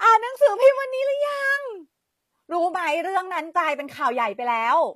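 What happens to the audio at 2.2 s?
At 2.2 s the speech is passing through what is likely HE-AAC compression, which runs through the whole clip rather than starting there. The codec keeps only the lower spectrum and synthesizes the treble by copying lower bands upward under a coarse envelope, a trade that fits a low bitrate around 24 kbps. The rebuilt highs don't match the real harmonics, so s sounds come out gritty, metallic and lispy, and the damage is plainly audible.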